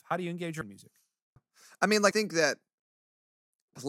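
At 0.61 s (after "how do you engage"), 1.36 s (after "in music") and 2.11 s (after "I mean"), the speech skips: audio missing between chunks, likely about a third of a second lost per handover, joined with no silence. Waveform and spectrogram show abrupt vertical seams without silent gaps.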